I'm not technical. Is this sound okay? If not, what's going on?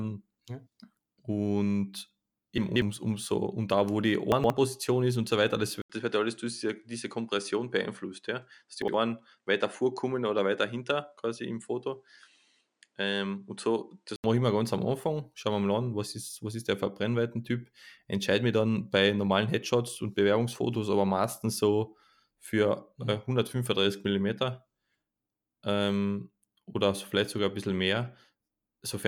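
No, there are two kinds of problem in this speech recording.

The first is chunks out of order, which happens three times. Small pieces of audio, each about 60 ms long, got played later than they should have, so a moment sounds jumbled. You'll hear it at 2.58 to 2.82 s, just before "umso und da wo"; at 4.32 to 4.5 s, between "und da wo die" and "ist und so weiter"; and briefly at 8.82 to 8.94 s.

The second is an input switched to a poorer device, which is likely what happened. Right after "und so weiter" and "das", around 5.8 s, there's a tiny gap of about 80 ms, and then the sound gets duller because the top end above 10.5 kHz disappears. A faint new background noise also comes in. The loudness stays about the same. This lasts until about 14.2 s, just before "ich mir ganz am", where the clearer sound returns.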